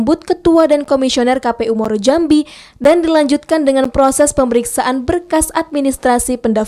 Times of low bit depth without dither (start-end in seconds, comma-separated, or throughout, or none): none